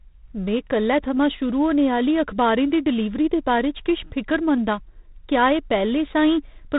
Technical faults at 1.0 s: G.726 ADPCM

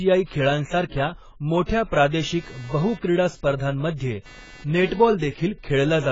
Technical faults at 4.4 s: AAC compression; computer activity noise

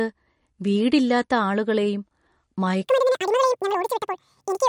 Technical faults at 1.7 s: MP3 compression

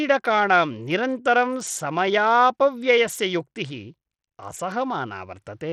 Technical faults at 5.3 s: Bluetooth SBC compression

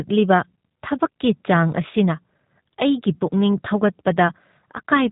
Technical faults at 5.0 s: G.729 codec

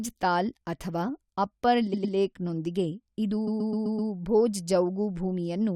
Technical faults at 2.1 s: repeated frames

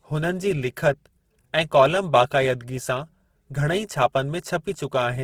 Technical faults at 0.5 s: Opus compression

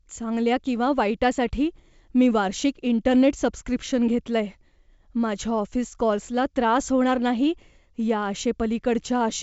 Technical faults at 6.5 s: none

